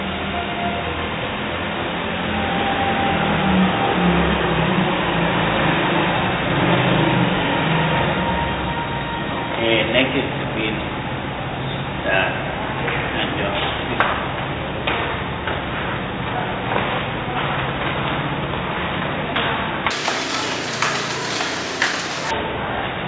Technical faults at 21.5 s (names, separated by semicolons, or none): wrong sample rate